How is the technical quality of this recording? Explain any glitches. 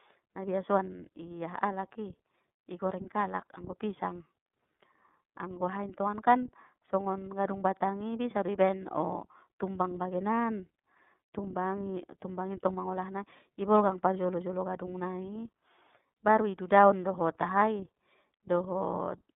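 The recording has one fault throughout: iLBC codec coding. From start to finish the speech sounds muffled, thin and noticeably rough and synthetic, with nothing above about 3.6 kHz or below 150 Hz. The codec encodes each 30 ms frame on its own with a coarse excitation model, and the result fits its 13.33 kbps narrowband mode. That compression damage is plainly audible.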